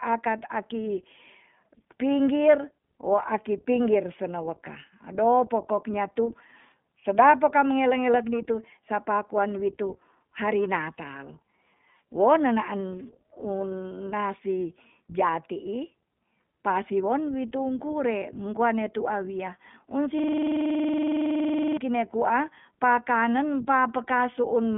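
The whole recording runs through the iLBC codec, so nothing gets past about 3.8 kHz and the speech sounds narrowband, a bit rough and synthetic. Each 20 ms frame is coded on its own, and the damage is plainly audible, which fits the 15.2 kbps mode.

Then from 20.19 to 21.77 s, right after "wia un", there's a system hang loop. The machine froze while the sound hardware kept replaying one 46.44 ms chunk, which fits a 2048-sample buffer. It repeats 34 times at 21.5 Hz, so you hear a buzzy, machine-gun stutter.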